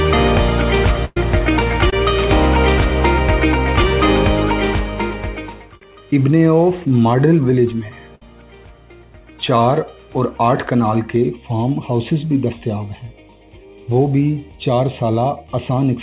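From 1.05 to 1.17 s the sound is held and fades out, with a brief silence before it resumes. This burst of packet loss lost roughly 120 ms of audio. The receiver covered about 110 ms by extending and attenuating the last sound, then skipped ahead past the missing stretch.

At 1.90 to 1.93 s there is a quick smear, a short concealed packet loss. About 20 ms never arrived in time, and the decoder bridged it by continuing the preceding sound before blending back into the real signal.

A second burst of packet loss at 8.15 to 8.24 s produces a shorter fade and jump. Around 50 ms went missing, covered by roughly 60 ms of fading continuation.

From 11.16 s to the end the sound turns hollow and phasey. This is channel delay causing comb filtering. One channel lags the other by roughly 0.3 ms, and summing them to mono cancels content at evenly spaced frequencies. The first notch falls near 1.5 kHz, inside the call path's band, which stops at 4 kHz.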